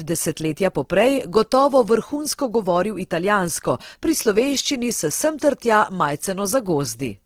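From start to end the speech carries a grainy, rough texture with a noisy edge on the voiced sounds, most likely Opus compression in its music-style CELT mode at a low rate, which fits something around 16 kbps. The encoder holds each band's energy but fills starved bands with noise or folded copies of lower ones, so the full bandwidth stays while the tone coarsens. That graininess, without the swirling, watery holes of MP3, tells the two apart.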